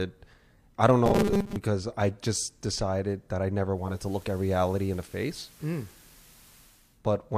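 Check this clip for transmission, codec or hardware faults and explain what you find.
Two faults are audible in this speech clip.

Robotic sound from repeated short buffers, 1.06 to 1.56 s, between "I don't" and "I just decided that": most of the speech is replaced by a rigid 200 Hz buzz, likely from a 5 ms buffer being repeated while new audio arrived too seldom.

Digital radio blending to analogue, 3.68 to 7.04 s, after "just decided that I": the receiver cross-fades over 457 ms to FM, which adds hiss roughly 30 dB below the speech, with no level jump.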